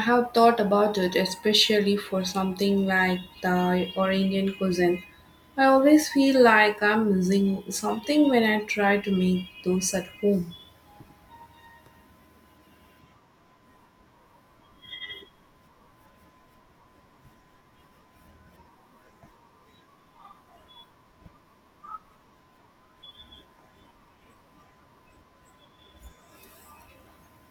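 A speech recording with no technical faults to report.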